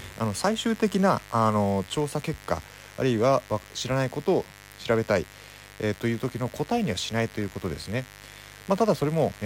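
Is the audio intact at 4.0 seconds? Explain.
No, a steady, raspy mains buzz runs under the speech throughout, roughly 20 dB down: switching spikes twice per 50 Hz cycle leak in, spraying harmonics into the kilohertz range.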